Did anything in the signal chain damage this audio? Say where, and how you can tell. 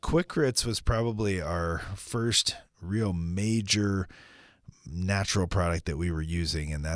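No, no signal-chain damage heard.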